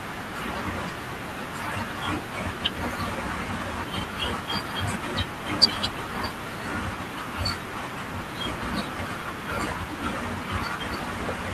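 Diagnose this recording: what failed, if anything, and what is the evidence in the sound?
Nothing failed; no faults detected.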